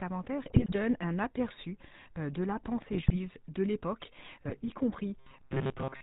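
Speech coded with the GSM full-rate codec from start to finish. The damage is plainly audible: a buzzy, gravelly roughness and nothing above 4 kHz, consistent with the 13 kbps full-rate coder rebuilding the voice from a vocal-tract model and a pulse train. GSM bit errors break in three times: 0.46 to 0.77 s, just before "un aperçu de la"; 2.80 to 3.17 s, between "un aperçu de la" and "de l'époque"; and 4.45 to 4.70 s, just after "de l'époque". Corrupted filter, pitch and gain values distort frames there, giving squawks, pops and gargling. From 5.18 s to the end, the voice becomes a rigid metallic buzz at 133 Hz. This is robotic sound from repeated short buffers. The likely cause is audio arriving too seldom, with a 7.5 ms chunk looped in place of most of the real signal.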